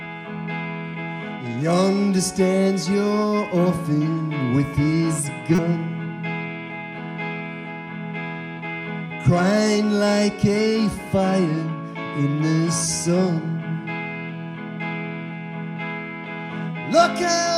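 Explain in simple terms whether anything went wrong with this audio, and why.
A short, loud glitch sounds from 5.55 to 5.59 seconds. It is a corrupt frame decoded: a couple of damaged data blocks were played anyway.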